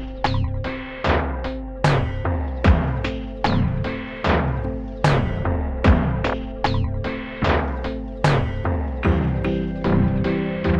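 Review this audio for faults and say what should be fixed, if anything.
Nothing needs fixing, as the signal holds steady throughout with no audible technical faults.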